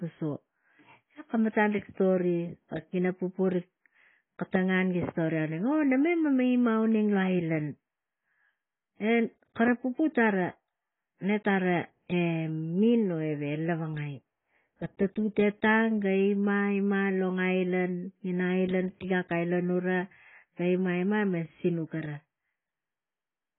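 Speech throughout, with nothing above about 3.7 kHz. It sounds dull, smeared and warbly, likely from heavy AAC compression at a very low bitrate, around 16 kbps.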